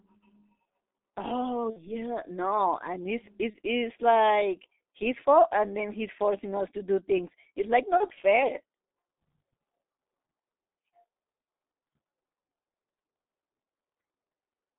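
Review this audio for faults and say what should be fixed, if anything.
Throughout, the speech sounds muffled and hoarse, with blurred consonants. This is heavy G.723.1 codec damage: a line band of roughly 200 Hz to 3.7 kHz and a rate of about 6.3 kbit/s. Prevent it by using a wideband, higher-rate codec such as Opus on this link.

At 1.70–1.93 s, 3.51–3.59 s and 7.97–8.05 s, the sound smears into a buzzy tone or coloured noise that fades, and stays weak or distorted afterwards. This is VoIP packet loss concealed by the speech codec, extrapolating over gaps that fit about 60 ms, 30 ms and 30 ms of lost frames. Prevent it by reducing network loss and adding forward error correction or a larger jitter buffer.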